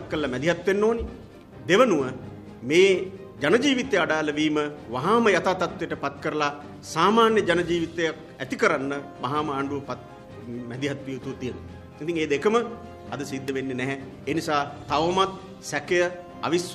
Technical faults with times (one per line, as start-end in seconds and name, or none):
13.48 electrical switching spike